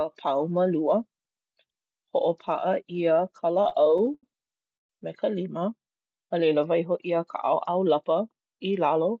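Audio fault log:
3.54–4.24 s, repeated stalls (stutter): the audio catches and drags seven times, the longest hold about 82 ms and roughly a quarter of that stretch filled in. Packets kept arriving late, the buffer ran dry over and over, and the receiver stretched the last sound each time, so nothing's lost but it stumbles.
4.77–4.90 s, call audio freeze: a brief hold of about 126 ms, most of it (around 120 ms) fading to silence before the sound picks up exactly where it left off. Likely packets got held up in transit and the jitter buffer emptied, so a gap was inserted rather than anything dropped.
7.69–8.29 s, jitter buffer speed-up: this bit runs at about 110% speed with pitch unchanged, so it sounds a little rushed. The buffer had built up extra delay, and the receiver trimmed it by snipping out small pitch-period chunks, around 70 ms in all, across the Opus call path, which tops out near 8 kHz.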